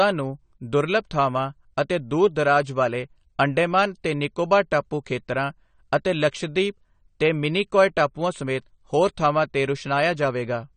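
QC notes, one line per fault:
Throughout, AAC compression: the speech has nothing above 9 kHz and sounds dull and smeared, with plainly audible warbling on sibilants. This is likely a low-bitrate AAC-LC encode, near 32 kbps. Unlike a plain low-pass filter, it adds fizzy, shifting texture.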